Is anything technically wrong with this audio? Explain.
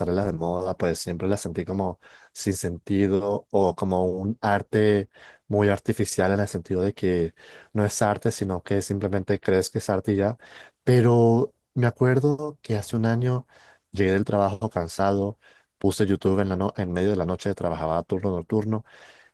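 Yes. Throughout the speech there is audible Opus voice compression, at a rate that points to about 16 kbps. A linear-prediction coder handles the lower band and a sparse transform layer fills the top, so voices sound hoarse and slightly robotic. Unlike a simple low-pass, the highs remain but sound grainy.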